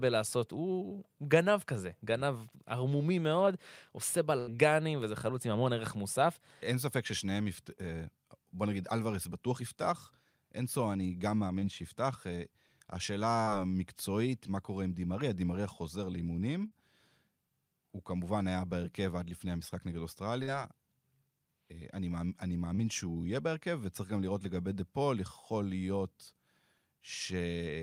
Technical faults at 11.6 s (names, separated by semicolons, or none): short concealed packet loss